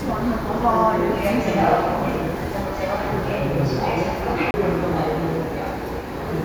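At 4.51 s a gap of about 30 ms begins, lasting until 4.54 s. The sound then resumes abruptly from a different point rather than continuing where it left off. This is a CD skip: a shock or a surface flaw knocked the laser off its track onto another turn of the disc's spiral, so the player muted briefly and carried on reading from the wrong place.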